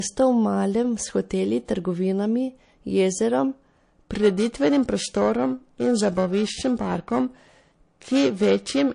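Throughout, the speech carries the watery, swirly treble loss and chirpy s sounds of MP3 compression, likely from an encoder starved of bits, which fits about 40 kbps. From 1.65 to 1.68 s, pre-echo: a long transform block spreads quantisation noise ahead of a sharp attack, so a 30 ms hiss about 10 dB up precedes it. From 4.14 s to the end, periodic clock jitter: the converter clock wobbles at around 1 kHz, adding sidebands that give the speech a rough, metallic edge.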